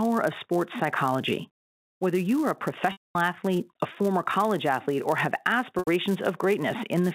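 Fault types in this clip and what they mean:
Filter restarted on every block: A filter in the chain loses its memory at each block boundary and starts from silence, so every block opens with a small transient. Here the ticks come 188 times a second, which fits a 256-sample block, and they merge into a steady buzz running under the whole speech clip, louder where the speech is louder and fading back in quieter passages. The telephone-band sound of the line can still be heard beneath it.
Packet loss with pitch repetition: Stretches of audio were lost in transit, and the receiver covered each gap by repeating the last pitch period and fading it out. After "you are a", a gap of 230 ms from 2.92 to 3.15 s is long enough that the repeated period fades to silence before "athlete a former college" returns with a brief cross-fade. After "college athlete or have", the 80 ms gap at 5.79 s sounds like a short, buzzy held tone.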